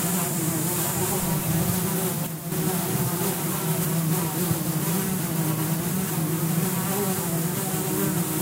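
One channel drops out from 2.27 to 2.52 s, likely from a lost stereo side; the mono sum dips abruptly by about 6 dB, then recovers.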